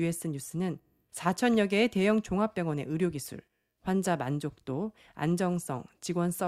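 A speech recording with no technical faults to point out. Nothing in it calls for a time, a cause or a fix.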